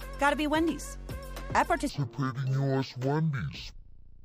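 From 1.89 s to the end, the stereo stream is read as mono: interleaved left and right samples are taken as one channel, so the sound plays at 0.5x speed and drops 12 semitones, an octave low, with a faint mirrored copy in the upper spectrum.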